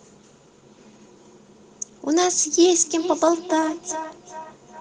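From 2.73 s to the end of the clip at about 4.8 s, the speech comes back as a delayed copy of itself, returning roughly every 0.4 s, with the strongest repeat sitting about 12 dB below the direct speech. This is feedback echo between two devices: two devices in the same room were on one call, and one played out what the other's microphone sent. That microphone picked the sound up again, and neither echo canceller removed it, because each cancels only its own device's playback.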